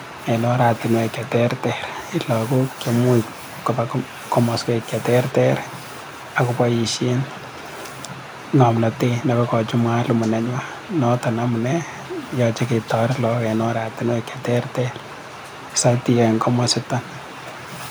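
No technical faults can be heard anywhere in this speech.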